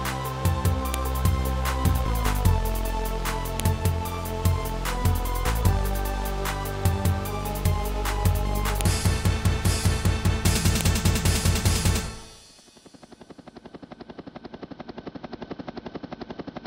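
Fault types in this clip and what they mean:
File header played as audio: The clip was built from separate WAV pieces joined together, and each piece's header was left in place. Those few dozen bytes of file information get played back as if they were sound samples. Each one produces a brief, sharp click or snap. It does not follow the surrounding audio. Here it happens four times, at about 0.94, 3.60, 8.81 and 10.81 s, marking where each new piece begins.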